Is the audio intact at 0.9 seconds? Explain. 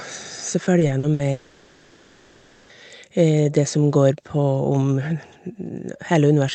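No. From 0.79 to 1.21 s there is repeated packet loss, heard as robotic sound: four holes, the longest 60 ms, each patched by stretching the sound just before it, so about a third of that span is synthetic fill. Unlike a single dropout, which leaves one clean gap or silence, these closely spaced patches repeat and break the signal into choppy sound with pieces missing, heard over the call codec's normal 8 kHz band limit.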